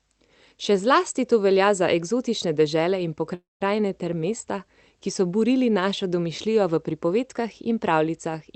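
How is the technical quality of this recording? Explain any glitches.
The recording has one clear glitch, a call audio freeze, heard through band-limited call audio that stops at around 8 kHz, consistent with an Opus call path. Between 3.34 and 3.62 s, right after "za eksotične dežele in", the sound stalls: the last moment is stretched into a fading buzz or hiss that drops to silence for roughly 180 ms. Speech then resumes with "ter mesta ki so" exactly where it left off. The likely cause is packets held up in transit until the jitter buffer ran dry, so the receiver filled the wait and everything after it arrives about 264 ms late. What distinguishes this from packet loss is that nothing is missing. The sentence is intact, with a gap inserted rather than a chunk cut out.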